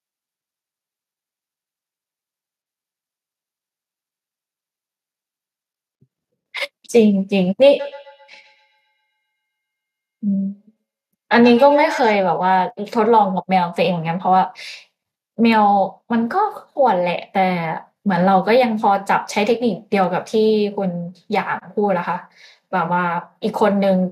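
At 7.62 s a single sharp click cuts across the speech, a thin vertical line through the spectrum. It is likely dropped samples: a couple of samples missing, so the waveform steps abruptly to a later value without removing any audible sound.

From 7.79 s to 12.24 s there is feedback echo between two devices. A second device in the room replays the far end, and the microphone captures it again outside its own echo canceller's reach. Each word returns at roughly 150 ms intervals, thin and ringing, peaking at about 13 dB below the speech.

At 20.04 s the same brief click recurs, again likely a jump across a couple of lost samples.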